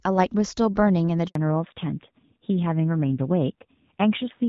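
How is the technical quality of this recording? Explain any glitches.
The recording has two linked faults on what sounds like a mobile call. Before them, the wideband codec sounds clean, consistent with HD Voice at around 12.65 kbit/s.

A handover gap runs from 1.27 to 1.35 s, lasting 80 ms. As the call switched from one network link to another, no speech frames arrived, so the sound fades out within a few tens of milliseconds and sits in true silence until the new link starts. It differs from ordinary packet loss because there is no buzzy repeated frame or smeared concealment filling the hole, just clean dead air, and the audio that returns has changed character.

A fallback to narrowband follows at 1.35 s and lasts to the end. The new link carries an older narrowband codec, the sound of which points to AMR-NB at about 7.4 kbit/s. Nothing above 4 kHz survives, so the voice turns duller, and the lower bitrate adds a rougher, grainier texture. 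A simple low-pass filter would dull the top without that coarseness, and it would not switch on abruptly right after a dropout the way this one does.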